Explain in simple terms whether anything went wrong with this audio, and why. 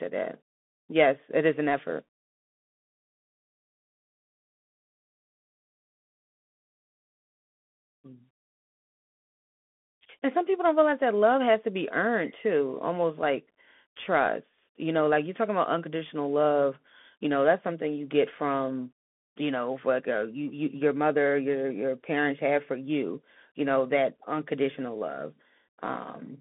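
The speech goes through a Bluetooth CVSD headset codec from start to finish. Nothing above 3.8 kHz survives, and a grainy hiss and scratchy s sounds distinguish it from a plain telephone line.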